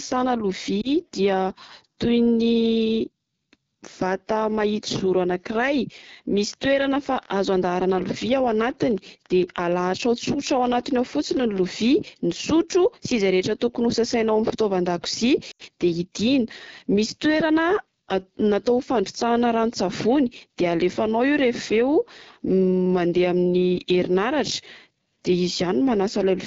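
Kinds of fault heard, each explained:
AMR wideband (HD Voice) codec: The speech is coded by a pulse-excited vocal tract model up to 6.4 kHz, with noise filling the top band. The rasp and roughness throughout fit one of the lowest rates, around 8.85 kbit/s. The damage is plainly audible.
Lost AMR speech frames: The decoder bridges missing frames by repeating the last pitch and tract settings at falling gain. A brief warble at 0.81 s fits one lost 20 ms frame. At 15.51 s, an 80 ms dropout fades quickly, as wideband concealment does.
Train of clicks: From 6.53 to 11.57 s, about forty similar clicks tick over the speech, averaging 8.15 per second at uneven spacing. They peak near the speech level and also sound in pauses. Nearby electrical interference or a struggling interface is the likely source.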